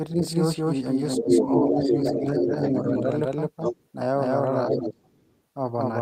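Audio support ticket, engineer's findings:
Doubled audio track, whole clip: full-band copy of the speech about 200 ms behind, at about the same level. Flat, no decay or room colour, so not reverb or acoustic echo. Likely a second capture path or misaligned edit.

Speech suppressed in double talk, 0.13–0.24 s (about 5 dB dip), 1.2–3.05 s (about 10 dB at worst, about a second affected), 4.7–5.14 s (about 15 dB). Talker's own voice ducks, not added sound. Likely echo canceller misjudging double talk.

Other side's voice leaking through, 1.15–2.2 s (about 5 dB above the talker), 2.63–2.69 s (about 5 dB below), 3.62–3.86 s (level with the talker), 4.73–5.4 s (about 35 dB below). A second voice, unlike the delayed self-copy. Likely residual loudspeaker echo.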